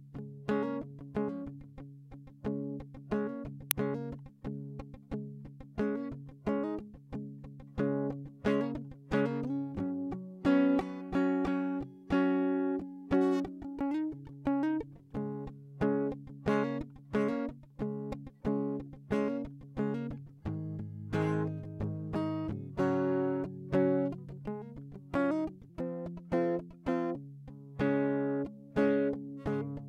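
A piece of music carrying two technical faults. At 3.71 s an uninitialised buffer was sent to the output before any audio had been written into it, so whatever stale memory it held was played out as samples. The result is a sudden, loud crack of digital noise lasting about 0.73 ms, which fits a 32-sample block, a tiny click-like burst. Between 25.70 and 27.15 s a section at the wrong speed appears, most likely because that stretch was played or edited against the wrong clock. The playback runs 1.23 times too fast, so tempo and pitch rise together: for roughly a second and a half the music sounds hurried and sits about four semitones sharp, then snaps back to normal speed and pitch.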